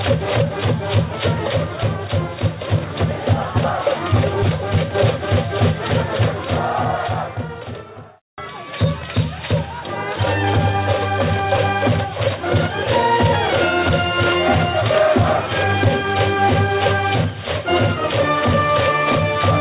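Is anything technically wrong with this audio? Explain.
No, nothing here sounds technically wrong.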